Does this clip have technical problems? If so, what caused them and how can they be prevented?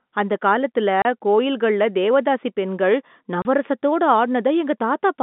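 Yes, there's packet loss filled with silence, twice: a 30 ms hole at 1.02 s, right after "அந்தக் காலத்துல", and another at 3.42 s, just after "காலத்துல கோயில்களில் தேவதாசிப் பெண்கள்". Each gap fits a single dropped 30 ms packet that the receiver replaced with dead silence, so the sound stops abruptly with hard edges. The narrow telephone band from the G.711 line is normal. A jitter buffer with packet-loss concealment would smooth over gaps like these.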